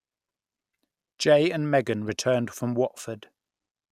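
A short speech recording with one spot of DAB burbling from 2.06 to 2.22 s: short blips of noise in single sub-bands where weak reception let roughly 0.15 percent bit errors corrupt the audio data of nine frames.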